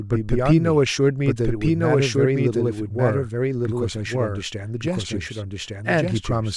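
From the start and all the way through, the speech has a doubled audio track: a second full-band copy trails about a second behind at roughly the same level, dry with no room tail. It's likely a second capture path or an edit leaving two copies misaligned.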